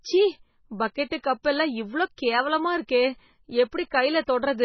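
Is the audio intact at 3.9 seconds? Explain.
No. At 3.90 s, pre-echo: the codec spread quantisation noise across a whole block, so about 14 ms of hiss precedes a sharp onset and softens its attack. Throughout, likely MP3 compression at a very low bitrate, around 16 kbps, removes everything above 6 kHz and leaves the speech watery, swirly and dull.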